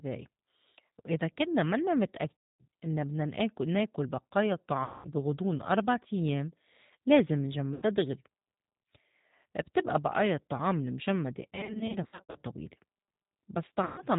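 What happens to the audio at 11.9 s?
From 11.55 to 12.37 s, right after "بتبقى بئايا الطّعام المجمّدة", there is VoIP packet loss concealed by the speech codec. About 400 ms of audio went missing in short gaps spread over 800 ms, with the longest single gap 60 ms. The decoder fills each hole by stretching its last pitch and filter into a fading buzz. Unlike a plain dropout, this leaves no silence, only smeared, weakened speech that takes a moment to recover.

Underneath, the G.729 codec at 8 kbit/s is plainly audible. It rebuilds speech from a vocal tract filter and a few pulses per frame and passes nothing above 4 kHz, giving a rough, slightly synthetic texture. That texture is constant throughout the clip, whereas the loss damage is brief and patchy.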